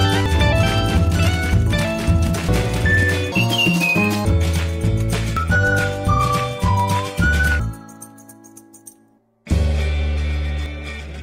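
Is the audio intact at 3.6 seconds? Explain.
No. From 3.32 to 4.25 s the sound turns sharply higher and hurried, running at 1.88 times its proper speed and rising about ten semitones. This section at the wrong speed likely comes from playback or editing on a mismatched clock, shifting speed and pitch together.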